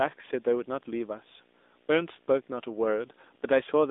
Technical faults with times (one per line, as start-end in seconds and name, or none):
0.00-3.90 video or display buzz
0.00-3.90 AMR narrowband mobile codec